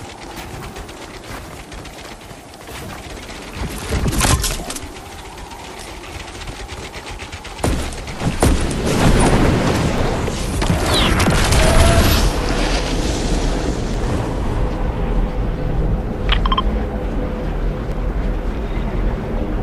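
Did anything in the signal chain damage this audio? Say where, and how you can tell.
Yes. Tiny clicks or skips occur at 4.00, 9.98, 11.96, 13.94 and 17.92 s, falling on a 2-second grid. This is overlap between stream segments at the playback stage. Adjacent segments' time stamps overlap, the player trims a few milliseconds, and the waveform jumps.

From 9.05 to 9.45 s the loud peaks take on a crackly, gritty edge. This is hard clipping at a converter or sample-format stage. The signal was driven about 3 dB past what that stage could pass, so the peaks were flattened and added high harmonics.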